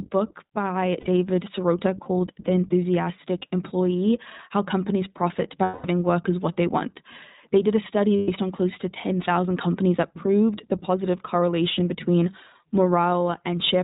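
The speech runs through the iLBC codec throughout, cutting everything above 4 kHz and leaving audibly rough, synthetic-sounding speech consistent with 20 ms frames at 15.2 kbps. Lost iLBC frames follow at 1.00–1.07 s, 5.64–5.86 s, and 8.16–8.29 s (between "did a study" and "on close to"). The decoder repeats the last pitch cycle, heard as brief held, buzzy vowels.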